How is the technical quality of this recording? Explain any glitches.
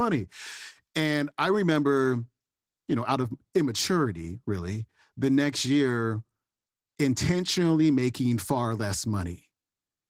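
The quality is compromised by plainly audible Opus voice compression. Throughout the recording, SILK codes the low band and a thin CELT layer codes the highs. The coarse excitation coding sounds hoarse and slightly robotic. This fits roughly 16 kbps with 20 ms frames. On a spectrogram, the highs above 8 kHz look blotchy and patchy.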